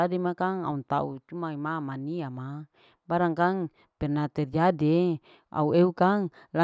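No technical faults can be heard anywhere in the recording.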